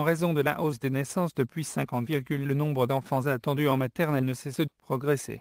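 The signal holds steady from beginning to end, with no audible fault anywhere in the audio.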